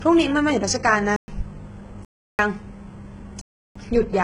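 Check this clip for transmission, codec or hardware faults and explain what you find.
Two problems stand out: heavy low-bitrate codec damage across the whole speech clip, and three dropouts where the audio falls to dead digital silence.

The codec damage runs the full length of the clip. It's most likely HE-AAC compression, and the heavy damage suggests a very low bitrate, around 12 kbps. At that rate the encoder really codes only the lower spectrum and then fakes the treble by copying lower bands upward and shaping them with a rough envelope. Nothing here goes above 11 kHz, and what sits near the top is synthetic. The s sounds come out gritty and metallic instead of clean.

The blocks of digital silence fall at 1.16–1.28 s (about 117 ms), 2.05–2.39 s and 3.41–3.76 s (about 341 ms each). In each one a chunk of samples was replaced with zeros, most likely because the output buffer didn't get filled in time. 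The two longer gaps are identical in length, which fits a 16384-sample block at 48 kHz. With no fade in or out, you hear a hard cut and a short hole in the speech.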